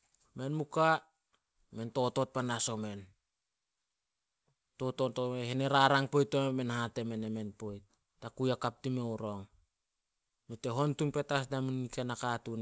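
No technical faults are audible in this speech.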